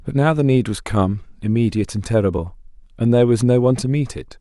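The output buffer ran dry twice, an underrun with held sample at 1.43 s and 2.38 s. Each time the converter froze on its last value. The sound flattened briefly, about 1.5 ms the first time, fitting a 64-sample block, and 4 ms the second, then resumed where it stopped with only a soft tick.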